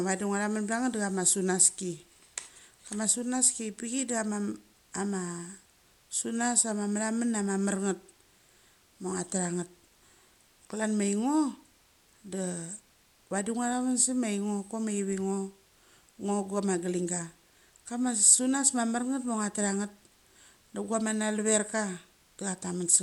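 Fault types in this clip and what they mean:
Dolby Digital compression: The speech is dull throughout, with nothing above about 11.5 kHz, and a rough, fluttering noise clings to voiced sounds. The likely cause is AC-3 coding at a low rate, which fits roughly 64 kbps, where the encoder narrows the band and leaves many frequency lines to be filled with dither noise.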